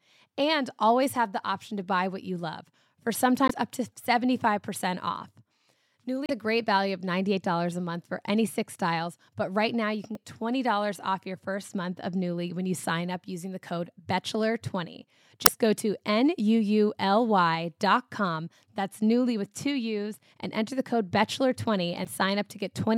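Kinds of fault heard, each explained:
Damaged data in a compressed stream: parts of the encoded speech were corrupted, so the decoder misread those frames, lost sync and had to search for the next valid frame header before it could carry on. Each break is a short chirp or blip lasting about 45 to 55 ms, five in all: at 3.46 s after "what you love for", 6.26 s just before "a great value of", 10.13 s after "but right now you", then 15.43 s and 22.02 s.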